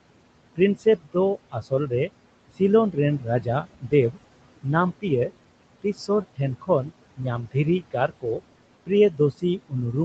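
Noise suppressor artifacts run through the whole clip: the steady room noise is pulled down by about 21 dB between phrases and rises again under the speech. Unlike the gaps in the next fault, it is the background that pumps here. From 0.56 to 2.1 s, 2.92 to 4.17 s, 4.63 to 5.31 s, 5.82 to 8.41 s and 8.86 s to the end, speech is cut by the noise suppressor, which mistakes soft consonants and word endings for noise and dips them by about 14 to 21 dB. Those sounds come out swallowed rather than broken up. The band stops at 8 kHz, which fits a wideband call codec.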